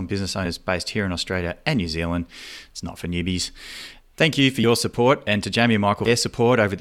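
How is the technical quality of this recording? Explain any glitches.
The speech is interrupted three times by compressed frames skipped. Whole coded frames, consistent with a 20 ms frame length, never reached the output, so playback jumps ahead: roughly two frames (about 40 ms) at 0.45–0.48 s and 4.63–4.65 s, and around ten frames (about 200 ms) at 6.05–6.08 s. Each join marks a jump past missing audio, with the last gap skipping about 200 ms of speech.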